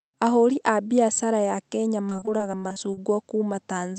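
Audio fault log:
2.09–2.99 s, repeated packet loss (robotic sound): the speech turns choppy, with short pieces dropping out again and again across this stretch. Audio kept going missing in brief bursts, the longest around 40 ms, and each hole was bridged by stretching the last sound forward before the next loss arrived. About a quarter of this span is that patched-in filler. The constant alternation of guessed and real sound is what gives the robotic edge.
2.29–3.16 s, jitter buffer slow-down: the speech drags slightly and sounds drawn out while its pitch stays put. Playback runs at about 94% speed here, adding roughly 60 ms overall. The receiver was rebuilding its reserve of buffered audio, so it repeated single pitch periods and slivers of pauses many times in a row. That stretches the sound in time without lowering it, and it overlaps the later part of the choppy stretch.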